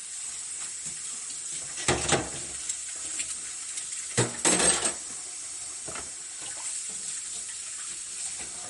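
MP3 compression runs through the whole clip. Nothing sounds above 11.2 kHz, so the top is sheared off, and the damage is plainly audible: a watery, swirling texture where weaker detail flickers in and out, with sharp transients smeared. The likely cause is an MP3 encoder starved of bits. It cut the treble at a fixed point and zeroed quiet frequency lines frame by frame, which fits a low bitrate around 48 kbps.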